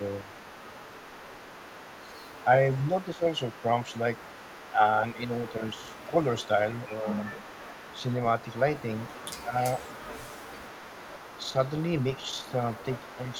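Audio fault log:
throughout: echo leak. A faint delayed copy of the speech trails the talker by about 412 ms, sitting roughly 20 dB below the direct voice. This is likely loudspeaker pickup on the far side that the echo canceller failed to remove and returned down the line.
0.2–0.29 s, 2.44–7.29 s, 9.43–9.56 s, 11.44–13.37 s: speech suppressed in double talk. The voice briefly dips, by around 10 dB, and in the last stretch by only about 5 dB. The dips are scattered within the longer spans rather than continuous. This is likely the echo canceller mistaking overlapping talk for echo and attenuating everything.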